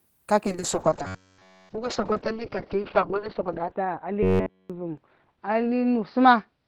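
Speech that undergoes a call bitrate drop from 0.47 s to the end, with the encoder's rate falling from 32 kbps to 8 kbps and staying at its lowest for 2.6 s. At that rate the codec quantises the signal much more coarsely and narrows the audio bandwidth from 20 kHz to 4 kHz. The voice therefore loses its upper frequencies and sounds muffled and rough, with a watery texture from the reduced bit budget. Two stretches, 1.07 to 1.69 s and 4.23 to 4.70 s, turn into a robotic sound with a fixed 93.8 Hz buzz. The voice becomes metallic and rigid in pitch while still loosely following the speech's rhythm. This is likely caused by repeated short buffers: fresh audio arrived too slowly, so playback looped the last block of roughly 10.7 ms over essentially the whole stretch, and that repetition rate sets the constant buzz pitch.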